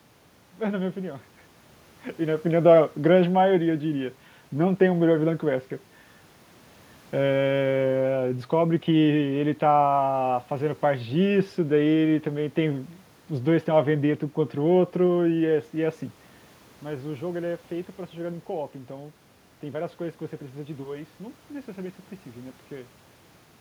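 No technical faults are audible.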